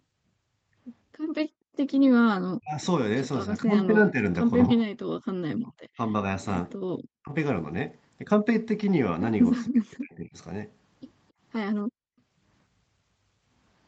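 It's a speech clip with speech suppressed in double talk at 2.56–2.83, 3.49–4.25, 4.67–4.87, 5.53–6.13, 7.22–7.32 and 9.51–10.35 s. The voice dips or breaks up, mostly by around 40 dB but only around 10 dB at 3.49 s. That's likely the echo canceller turning everything down while both ends talked. There's also background gated by the echo canceller at 5.15–5.25 and 11.83–12.17 s, where the room sound drops by about 40 dB while the far end plays and then comes back.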